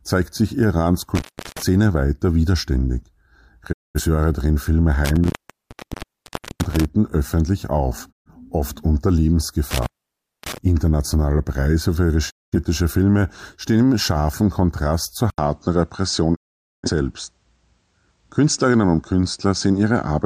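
The audio has three kinds of fault. Intermittent contact cuts the sound at 1.15 to 1.62 s, 5.05 to 6.85 s and 9.71 to 10.58 s. The line stays open for about 0.36 s, 1.3 s and 0.57 s. A loose cable or plug is breaking the circuit, so each gap has crackle at its edges and faint hiss inside. Digital broadcast dropouts mute the sound at 3.71, 8.11, 12.29 and 16.34 s. Each one fades out over 20 ms. The holes last 213 ms, 128 ms, 213 ms and 469 ms. The receiver lost good frames and stayed muted until clean data returned, so that material is gone. From 15.3 s to the end, the sound turns duller. Nothing is left above 9.2 kHz. The change starts with an 80 ms silence, and a new faint noise floor appears well below the signal. The level does not jump. The likely cause is an input switched to a poorer device in mid-recording.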